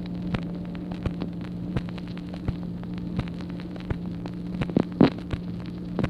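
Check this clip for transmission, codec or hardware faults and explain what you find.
No transmission, codec or hardware fault can be heard anywhere in the clip.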